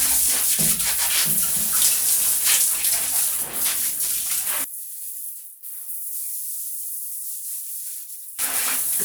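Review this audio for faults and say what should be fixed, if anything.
From 4.64 to 8.39 s the mono level drops by about 11 dB. The likely cause is one channel inverted, cancelling shared content. Check channel polarity before summing to mono.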